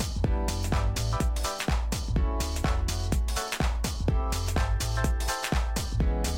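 No technical faults can be heard anywhere here.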